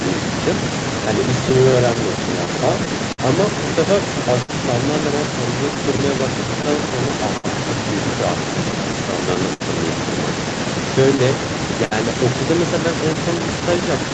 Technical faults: clock drift between sender and receiver; scattered short gaps; short stall from a late packet; repeated stalls (stutter)

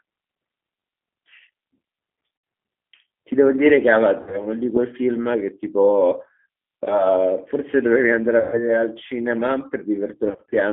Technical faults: G.729 codec; VoIP packet loss concealed by the speech codec

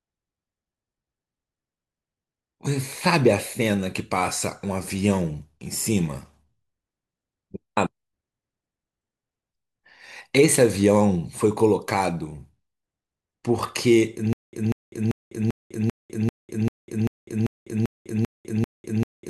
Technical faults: stutter with silent gaps

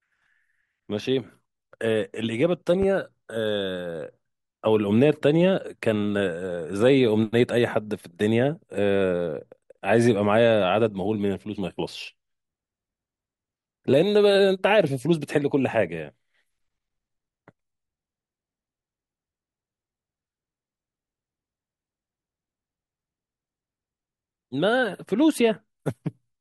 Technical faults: loud pop

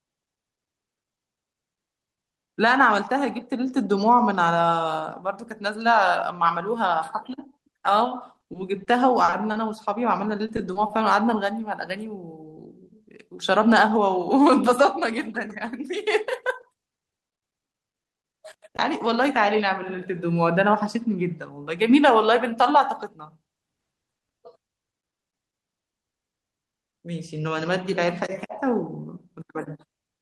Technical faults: repeated packet loss (robotic sound); jitter buffer speed-up

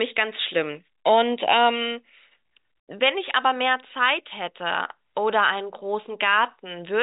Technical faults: none

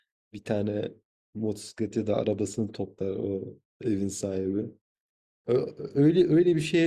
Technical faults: none

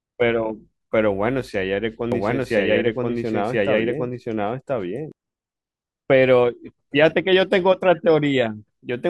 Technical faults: doubled audio track

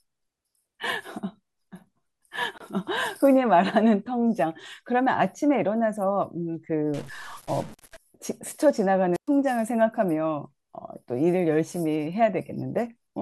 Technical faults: gap at a join of encoded pieces; stuck bit; wireless microphone squelch dropout

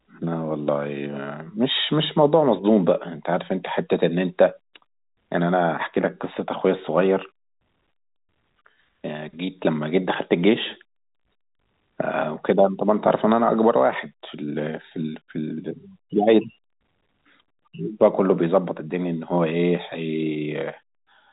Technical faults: none

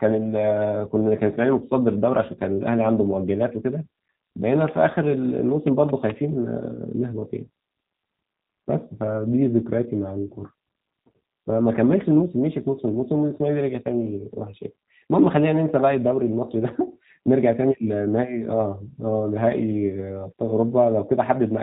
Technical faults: G.729 codec; train of clicks

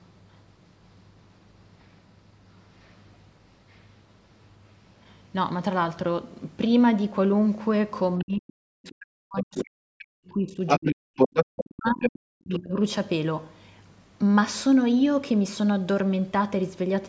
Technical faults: other side's voice leaking through; speech suppressed in double talk

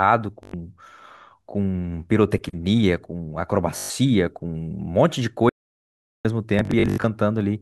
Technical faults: Bluetooth stutter; audio dropout to silence

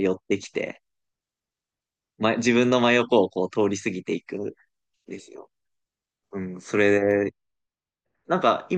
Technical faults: de-emphasis applied wrongly

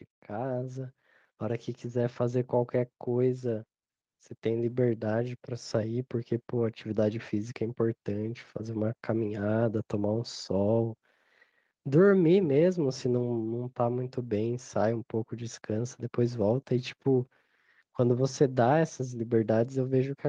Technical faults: automatic gain rising

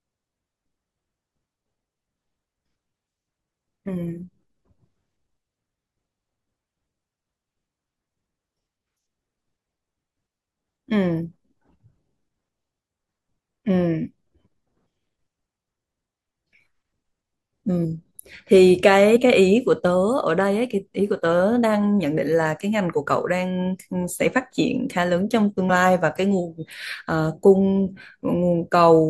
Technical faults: compressed frames skipped

